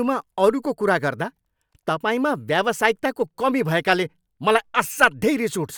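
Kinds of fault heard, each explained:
No kinds of fault are heard in this speech.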